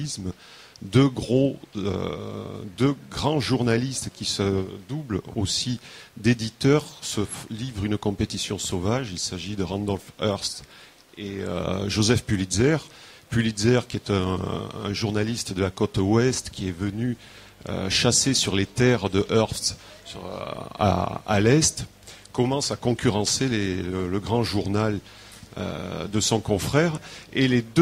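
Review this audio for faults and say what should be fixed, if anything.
Mains hum runs from 16.33 s to the end: a steady 50 Hz tone from power-line coupling, about 30 dB below the signal, seen as a flat horizontal spectrogram line. Breaking ground loops and keeping cables away from transformers would prevent it.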